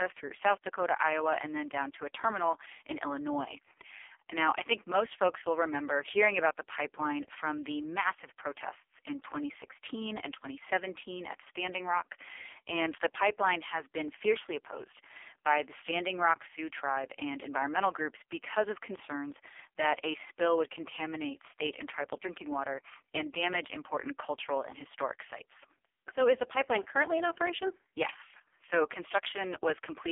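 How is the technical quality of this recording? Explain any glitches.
Poor: the whole recording has passed through a low-rate mobile phone codec. From start to end, the AMR narrowband mobile codec confines speech to a telephone band of roughly 300 Hz to 3.4 kHz, with nothing above 3.5 kHz. The heavy synthetic buzz points to the codec's lowest mode, around 4.75 kbps, where too few pulses per frame drive its vocal-tract model, leaving the speech muffled, thin and robotic.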